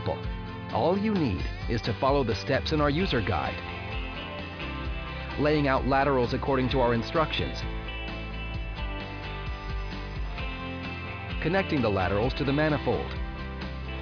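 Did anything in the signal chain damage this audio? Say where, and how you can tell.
No, nothing in the signal chain audibly damaged this audio; the signal stays continuous and stable at every stage, with no sign of harm anywhere along its path.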